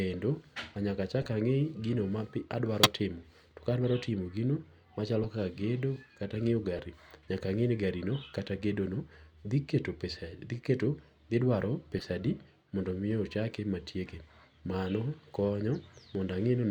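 Corrupt frames were decoded in this speech clip: damaged compressed frames, a few consecutive ones each time, were played anyway, throwing energy into wrong frequencies as brief chirps or noise bursts at 1.22–1.26, 2.82–2.89, 5.22–5.26, 6.76–6.80, 10.14–10.17 and 11.98–12.04 s, loudest at 2.8 s.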